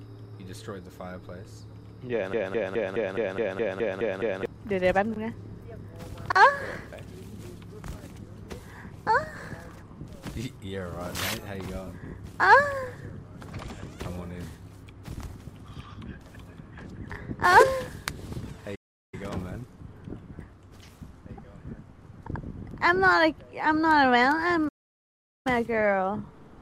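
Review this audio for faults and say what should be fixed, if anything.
A broken-record loop runs from 2.33 to 4.46 s: a fragment of about 210 ms plays ten times in a row, identical each pass, before normal sound returns. The likely cause is that the player, encoder or stream stalled and kept resending the last chunk it held, so whatever should have filled those two seconds is gone. To prevent it, have the pipeline output silence or drop out, rather than replaying stale data, whenever fresh input stops arriving.

Two playback stalls cut the sound off in mid-flow, from 18.75 to 19.14 s (about 0.37 s) and from 24.68 to 25.47 s (about 0.77 s), and each time it resumes after the gap. This is likely the output running dry, either because the buffer underran or because the audio thread was blocked, so nothing reached the device until data flowed again. To prevent it, enlarge the playback buffer and keep the audio thread at high priority, free of blocking work.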